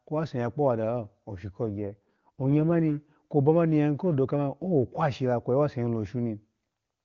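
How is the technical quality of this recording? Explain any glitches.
The recording has one glitch: an AMR rate drop from 1.68 to 2.79 s, just after "ya kpowadalo oshu ko". The wideband HD Voice coding around it sounds like a high AMR-WB rate, near 23.85 kbit/s, with at most faint codec damage. During the drop, the speech turns rough and synthetic for about 1.1 s. The bandwidth stays the same and there is no gap. The sound points to the network forcing the codec down to about 8.85 kbit/s and spending the freed bits on error protection. The clean sound returns when the rate climbs back.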